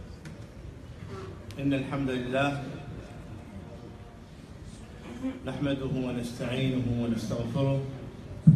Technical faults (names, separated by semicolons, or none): none